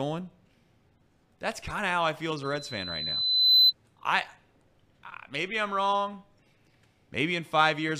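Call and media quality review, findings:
Loudspeaker feedback squeal, 2.43 to 3.73 s, right after "how I feel as". Single 4 kHz tone swells over about a second to roughly 10 dB above the speech. Probable component: open mic near its own loudspeaker. Loop gain exceeds one at 4 kHz, so that frequency builds on itself. It stops at 3.73 s. That suggests the loop was broken, by muting, moving or gain reduction. Check mic placement, monitor level and feedback suppression.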